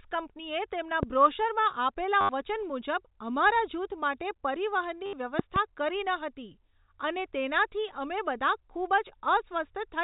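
A voltage spike, likely from a plug, switch or static discharge, enters the chain at 1.03 to 1.05 s, between "કંપનીએ તેમના" and "બ્રોશરમાં આપેલા વચન મુજબ". It lands as one sharp loud pop, around 15 dB above the speech, which carries on underneath. A second disturbance of the same kind hits from 5.39 to 5.58 s, just before "કરી ન", this time as two pops in quick succession, peaking near 20 dB over the speech.

Between those, the stream suffers packet loss with the last packet repeated. From 2.21 to 2.29 s, after "કંપનીએ તેમના બ્રોશરમાં આપેલા" and before "વચન મુજબ અમારા જૂથ", 80 ms of audio goes missing, and again from 5.06 to 5.13 s, 70 ms. The receiver keeps replaying the final good packet, and the joins don't match the pitch of the speech, so each gap becomes a robotic stutter with a buzz near 100 Hz, which fits 10 ms packets. All of this sits on top of narrowband telephone audio with nothing above 4 kHz.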